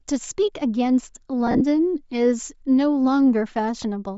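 Throughout the clip the speech carries a breathy, grainy edge in the upper range, where the high frequencies sound replaced by hiss rather than simply rolled off. This points to Bluetooth LC3 compression as the likely cause: the LE Audio codec, at a rate that fits about 32 kbps with 10 ms frames, discards much of the upper spectrum and fills it with noise. A plain low-pass filter would sound dull and clean instead, without this granular texture.

From 1.47 to 1.62 s, lost LE Audio frames break the speech. About 90 ms of audio goes missing, which fits roughly nine 10 ms frames, scattered across 140 ms, and the longest gap is around 40 ms. At each gap the decoder repeats the last spectrum with randomised phase, so the sound turns into a short noisy smear instead of dropping to silence or repeating as a clean stutter. Because the gaps are short, none of them fades fully away.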